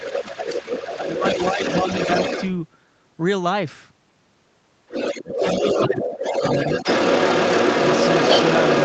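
A speech recording from a call, coded with Opus and band-limited to 8 kHz, has two problems. The first is speech suppressed in double talk. The talker's level dips from 0.0 to 1.23 s, briefly at 1.54–1.59 s, then at 5.15–5.43, 5.86–6.09 and 6.29–6.44 s. Drops reach about 10 dB, and about 20 dB at 5.15 s. The likely cause is an echo canceller that turned everything down while both sides spoke. The second problem is the other side's voice leaking through. A second voice is audible from 0.0 to 2.5 s, slightly quieter than the talker. It returns from 4.88 s to the end, now somewhat louder than the talker. This is likely loudspeaker echo that the canceller failed to remove.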